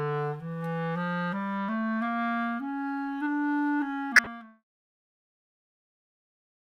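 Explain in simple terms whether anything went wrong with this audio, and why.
Between 4.16 and 4.27 s there is a corrupt frame decoded: damaged data in a few compressed frames was played anyway, so energy lands at wrong frequencies and a short glitch is heard, while the deliberate fade-out is under way.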